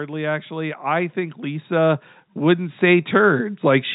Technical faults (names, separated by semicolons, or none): automatic gain rising